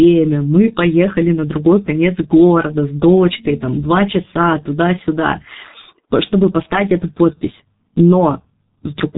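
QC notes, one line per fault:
Throughout: G.723.1 codec damage, heavy. The speech is muffled and hoarse, with nothing audible above about 3.8 kHz, so sibilants and fricatives lose their edge and consonants blur together. The low bitrate of about 6.3 kbit/s leaves the coder modelling the voice in coarse 30 ms frames. The vocal-tract model is refreshed slowly, which smears fast articulation and adds a rough, buzzy quality to voiced sounds.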